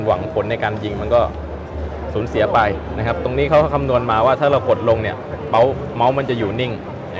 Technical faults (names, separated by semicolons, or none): none